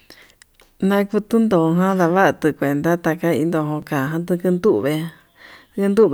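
At 0.49 s the sound jumps forward, and at 3.82 s it happens again with a skip about twice as long. There's no gap of silence either time, just a hard splice. That's most likely a dropped buffer (overrun): the samples weren't collected before the hardware wrote over them, so a sliver of audio vanished and the edges were joined. The first loss is a millisecond or two, the second a few milliseconds.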